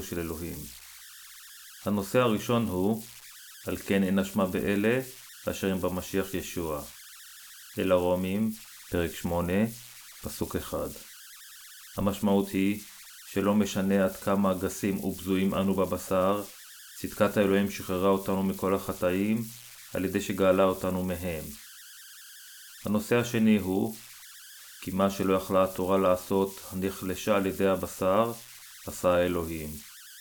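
All the way through the speech there are converter idle tones: an undithered delta-sigma converter slipping into repeating bit patterns at low levels, giving a whistle around 1.5 kHz in the gaps and a grainy hash under quiet passages, sitting about 19 dB below the signal.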